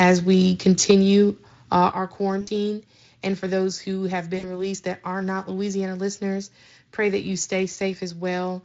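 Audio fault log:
0.79–0.91 s, microphone overload: The loudest peak is flattened about 5 dB past the converter's limit, with roughly one sample in twenty pinned, giving a harsh crackle. The likely cause is input gain set too high. Unlike codec roughness, the grit sits only on that peak.
0.91 s and 1.92 s, microphone volume stepped down: Voice and background drop together in a single step, by about 4 dB and then about 7 dB. This is likely the call software reacting to the microphone being too loud, the first step right after the clipping. It is an abrupt step without distortion, not a gradual compressor-style fade.
2.41–2.49 s, 4.37–4.47 s and 7.39–7.42 s, VoIP packet loss concealed by the speech codec: After "uh our", between "for those who have" and "released that are not", and after "listeners pray that you", the sound smears into a fading buzzy tone, covering 60, 60 and 20 ms of lost audio. 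The decoder is extrapolating from the last good audio. The dulled sound lingers briefly after packets return, heard over the light Speex coding at 23.8 kbps.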